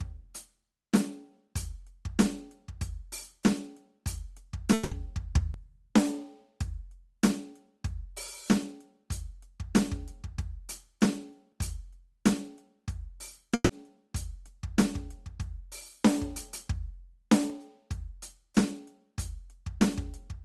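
From 4.73 to 4.92 s the music stops moving and smears into a held, fading buzz or hiss for about 180 ms, then picks up further along, skipping what should have played in that stretch. This is a long network dropout. The stream likely stopped arriving, and the receiver filled the gap by stretching and turning down the last sound it had. The fill never reached full silence before the audio returned.

At 5.54 s there is a brief skip, a tiny jump forward of a few hundredths of a second where the two sides butt together with no gap. The same jump returns at 17.50 s. This is audio missing between chunks. The processing likely worked in blocks, and these two skips sit on boundaries that fit 6-second chunks. A sliver of sound was dropped at each handover.

From 13.54 to 13.70 s the music again turns into a short held buzz or hiss that fades over about 150 ms, dips briefly to silence for around 10 ms, then resumes ahead of where it left off. 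This is a burst of packet loss. Several consecutive packets were lost or arrived too late, and the receiver concealed the gap by extending and attenuating the last audio before jumping forward. The call path's Opus coding is audible throughout as a top end that stops at about 12 kHz.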